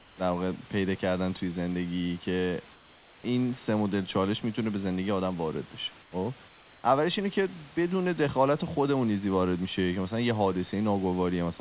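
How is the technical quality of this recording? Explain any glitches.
The recording has comfort noise in place of the background in four pauses: 0.00 to 0.18 s, 2.74 to 3.24 s, 6.02 to 6.12 s and 6.48 to 6.84 s. The likely cause is discontinuous transmission: the sender stops sending during silence, and the receiver fills each gap with synthetic noise. There, the real room background becomes a flat, featureless hiss about 3 to 5 dB quieter. The audio is band-limited, with nothing above 4 kHz, consistent with a narrowband telephone codec.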